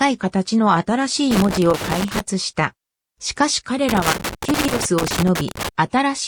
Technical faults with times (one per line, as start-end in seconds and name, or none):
1.31-2.20 loose connector crackle
3.89-5.69 loose connector crackle